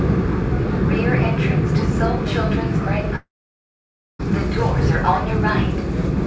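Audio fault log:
3.16–4.22 s, long network dropout: packets likely stopped arriving for about 1.04 s, so the receiver stretched the last sound into a brief fading buzz, then left roughly 0.9 s of silence before the sound returns with that stretch missing.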